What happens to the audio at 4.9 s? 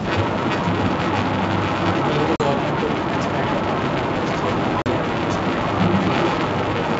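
Just before 4.9 s, from 4.82 to 4.86 s, there is packet loss on an ADPCM call. About two packets' worth, 40 ms, drop to silence. The decoder's adaptive predictor and step size then lose step with the sender, so the speech comes back slightly distorted before settling. A waveform shows a hard-edged flat gap, and a spectrogram shows a blank vertical slot.

Running through this moment is an echo leak: a copy of the speech trailing by 333 ms at roughly the same loudness. It likely comes from the far side's loudspeaker sound getting past its echo canceller. On a spectrogram it appears as a duplicate of the speech patterns, shifted a third of a second later.

The filter restarted on every block adds a 200 Hz buzz whose loudness follows the signal. A waveform shows small transients at regular intervals, and a spectrogram shows them as evenly spaced vertical ticks.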